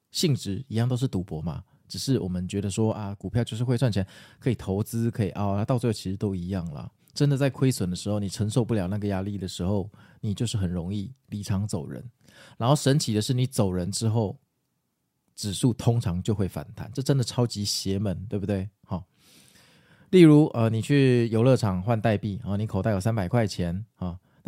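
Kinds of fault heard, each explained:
One channel drops out: one stereo channel likely cut out before the mono sum, so the speech falls abruptly by about 6 dB from 2.92 to 3.24 s.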